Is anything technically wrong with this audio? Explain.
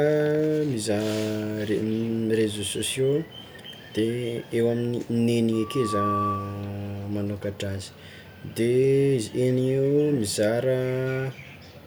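Yes. Loudspeaker feedback squeal runs from 5.52 to 6.75 s. The microphone is picking up the loudspeaker it drives, and around 1.2 kHz the loop gain climbs past unity, so that frequency keeps reinforcing itself on each pass. It is heard as a single steady tone that swells over roughly half a second into a piercing whistle, reaching about the same level as the speech before it cuts off.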